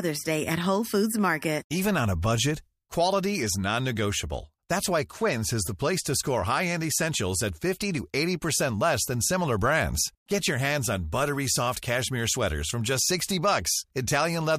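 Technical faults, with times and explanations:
Nothing technical stands out in this speech recording; there's no fault to list here.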